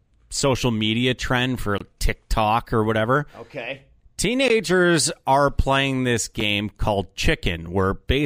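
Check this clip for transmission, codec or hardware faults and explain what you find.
Three blocks of digital silence: 1.78–1.81 s (about 23 ms, fitting a 1024-sample buffer), 4.48 s (17 ms) and 6.40 s (6 ms, fitting 256 samples). The output buffer likely went unfilled, so the speech drops abruptly to silence and back, giving short holes, with the 6 ms one heard as a tick or dip. On the waveform these are flat lines, and on the spectrogram they are blank vertical gaps.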